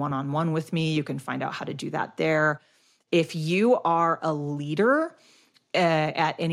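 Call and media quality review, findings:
No faults found in the speech recording. Nothing to log against any component.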